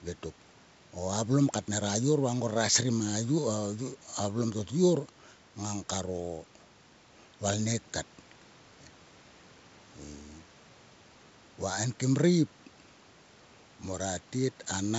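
Speech over a wideband telephone path, with audio up to about 7 kHz and room noise sitting about 33 dB under the speech; nothing wrong is audible.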